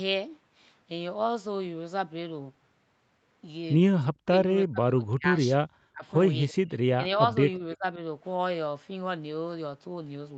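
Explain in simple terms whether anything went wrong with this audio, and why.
Between 4.12 and 7.84 seconds, the speech shows speech suppressed in double talk, likely because both people on the call were talking at once. The echo canceller, which removes the loudspeaker's sound from the microphone, couldn't separate the talker from the other side and turned everything down. The voice sinks sharply or nearly vanishes from 4.12 to 4.38, 4.64 to 5.24, 5.87 to 6.04, 6.57 to 7.02 and 7.58 to 7.84 s, so parts of the speech are lost.

At 6.49 to 6.54 s there is a brief echo leak. The loudspeaker on one end was likely picked up by its own microphone, and the echo canceller didn't remove all of it, so some of that sound was sent back. What you hear is a short, very faint copy of the speech arriving about a third of a second late. It is only a small scrap, well below the main speech.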